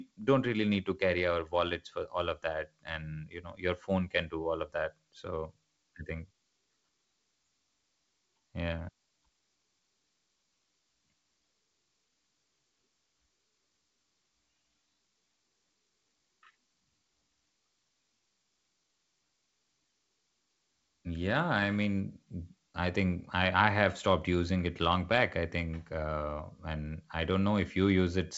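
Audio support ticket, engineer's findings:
No faults found in this speech recording.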